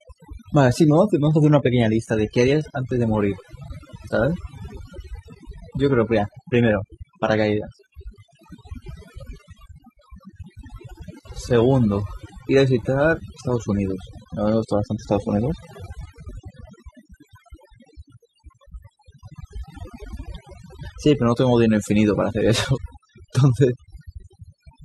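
Overdone noise removal runs throughout: a too-aggressive denoiser suppresses frequency bands near its noise estimate, leaving near-silent, twinkling gaps. Adaptive stream at a lower bitrate, 1.26 to 13.26 s: quality drops abruptly without a gap, with nothing above 14.9 kHz, which fits a step down from 96 kbit/s AAC-LC to 20 kbit/s HE-AAC.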